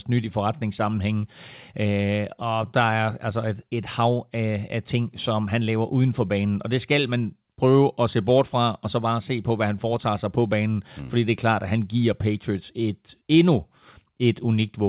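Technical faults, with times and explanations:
No technical faults can be heard in this speech.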